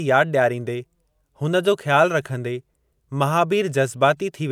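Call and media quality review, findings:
No faults detected in playback.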